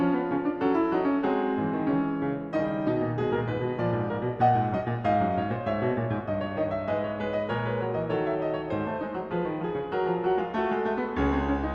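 No technical faults can be heard anywhere in this music.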